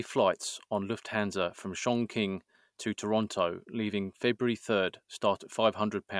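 No technical faults can be heard anywhere in the speech recording. There are no events to place in time.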